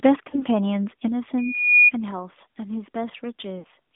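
Throughout the clip the speech carries the sound of an AMR narrowband mobile codec. Energy sits only between about 200 Hz and 3.6 kHz, and the codec rebuilds each 20 ms frame from a vocal-tract model excited by sparse pulses, so the voice is plainly buzzy and synthetic. The coarseness fits the 10.2 kbps AMR-NB mode. On a spectrogram, everything above 3.6 kHz is empty and the harmonics look smeared and blocky.

At 0.30 s comes the first lost AMR speech frame event, lasting to 0.43 s. It points to a single 20 ms frame failing its check. The decoder carried the previous pitch and filter settings forward at falling gain, producing a short dip and warble before the voice returns slightly rough. The waveform shows a brief sag in amplitude, and the spectrogram shows harmonics held flat for a moment and then fading.

At 1.08 s the microphone volume steps down. Voice and background drop together by about 6 dB in one instant, most likely because the call software judged the input too hot and lowered the device gain. 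The waveform envelope shows a clean, sudden step to a lower level, with no change in the spectrogram's shape, only its overall intensity.

From 1.37 to 1.91 s a loudspeaker feedback squeal appears. The microphone is picking up the loudspeaker it feeds, and at 2.4 kHz the loop gain exceeds one. That single tone swells over roughly 0.4 seconds until it sits around ten decibels above the speech. It sounds like a rising whistle. On the spectrogram it is one bright horizontal line at 2.4 kHz, thickening as it builds.

From 3.60 to 3.66 s lost AMR speech frames recur, this time fitting two consecutive 20 ms frames. The concealment stretches the last sound and lets it fade further before the signal recovers. The waveform shows a deeper amplitude hollow, and the spectrogram shows frozen, decaying harmonics across the gap.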